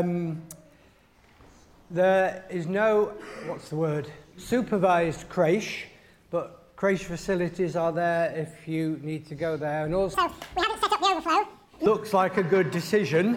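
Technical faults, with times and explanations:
10.14 to 11.86 s, audio read two samples at a time (double speed): the reader took sample pairs as single frames, so sound runs twice as fast and an octave higher.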